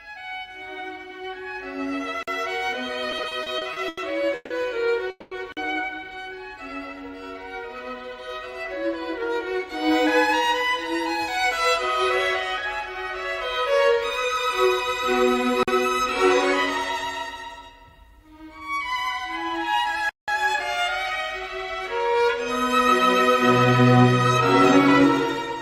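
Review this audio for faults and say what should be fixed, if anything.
Block of digital silence at 2.23, 5.52 and 15.63 s (each about 46 ms, which fits a 2048-sample buffer) and 20.09 to 20.28 s (about 186 ms, fitting an 8192-sample buffer). Output blocks likely went unfilled, so the sound drops abruptly to silence and returns. To prevent it, give the audio thread enough priority and headroom that every buffer is filled before its deadline.

Repeated stalls (stutter) from 3.11 to 4.52 s. Nine separate waits, the longest 150 ms, were bridged by extending the last sound, adding about 390 ms in total. Nothing is lost, but the passage drags and halts repeatedly. To prevent it, size the jitter buffer for the network's actual delay variation so it does not keep running dry.

Call audio freeze from 5.10 to 5.33 s. The sound holds as a fading continuation for about 210 ms, ending in roughly 20 ms of silence, then resumes where it stopped. 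The likely cause is packets held up in transit, emptying the jitter buffer. To prevent it, improve network path stability or add buffering margin against delay spikes.

Jitter buffer speed-up from 8.82 to 11.74 s (105%, around 150 ms removed), 18.17 to 18.91 s (105%, around 40 ms), 21.98 to 22.80 s (107%, around 70 ms) and 23.56 to 25.01 s (103%, around 50 ms). Excess buffered audio was trimmed by cutting out small pitch-period slices, so the sound runs faster while keeping its pitch. To prevent it, avoid the bursty packet arrivals that overfill the buffer, or drain the surplus more gently.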